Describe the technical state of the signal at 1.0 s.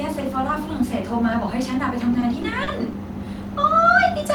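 At 1.0 s the speech signal is intact, with no dropout, clipping, distortion or other technical fault audible at that moment.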